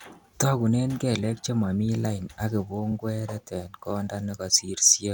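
Speech with a brief stutter at 2.91 to 2.93 s, just after "kelek chemomi lain ak": a 23.2 ms slice plays twice. These are repeated frames, where compressed data was sent twice, consistent with a single frame played an extra time.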